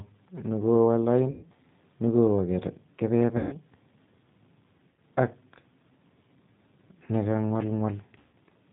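Speech, and the whole thing runs through the G.729 codec at 8 kbit/s, so it's band-limited with nothing above 4 kHz and has that plainly audible rough, slightly synthetic texture from the codec rebuilding the speech from a filter, a pitch predictor and a few pulses per frame. On top of that there's VoIP packet loss concealed by the speech codec at 1.31–1.46 s, 3.37–3.56 s, 4.89–5.01 s and 8.18–8.36 s, with gaps of 120, 150, 90 and 150 ms that fit runs of three to five lost 30 ms packets. At each gap the decoder extrapolates from the last pitch and filter into a buzzy tone or coloured noise that fades, and it sounds weak for a bit after the real audio returns.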